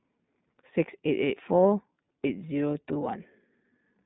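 Throughout, the iLBC codec limits the speech to 150 Hz–3.7 kHz, so a spectrogram is blank above 3.8 kHz; independent frame-by-frame coding sounds plainly rough and synthetic.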